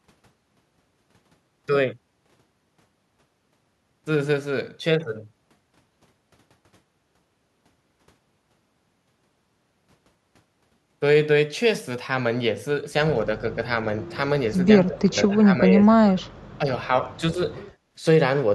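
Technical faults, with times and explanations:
14.65–16.28 s, 16.58–16.64 s and 17.2–17.4 s, speech suppressed in double talk: the speech drops about 30 dB, then briefly dips about 10 dB, likely from an echo canceller muting overlapping talk.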